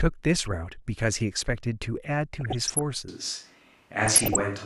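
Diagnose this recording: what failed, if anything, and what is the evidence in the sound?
Weak DAB reception let bit errors, at a fraction of a percent, slip past error correction into the MP2 audio data, corrupting samples and scale factors. Individual sub-bands jump in level frame by frame, giving DAB burbling, with short blips of noise, from 0.41 to 0.74 s, 2.34 to 2.81 s, and 4.06 to 4.43 s.

At 3.08 s the recording likely switches to a distant microphone, such as a camera mic, after the close microphone's signal dropped out. The speech turns suddenly roomy and hollow, with thinner bass and room noise roughly 35 dB below the speech, through to the end, with little change in level.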